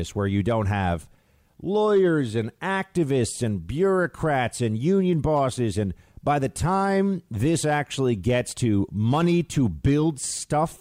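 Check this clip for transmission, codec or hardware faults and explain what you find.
No transmission, codec or hardware faults turn up in this speech clip.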